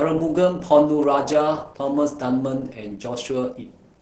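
Opus voice compression runs through the whole of this speech clip: the spectrum is empty above 9.3 kHz, and the voice comes out muffled, hoarse and a little robotic. The excitation is being coded very coarsely by a linear-prediction voice coder, which fits SILK-mode Opus in wideband operation at a low rate of around 10 kbps with 20 ms frames, and the damage is heavy. An electrical switching spike appears at 1.03 s, a sharp snap laid over the speech, most likely an arc from a nearby switch, motor or static discharge picked up on the audio line.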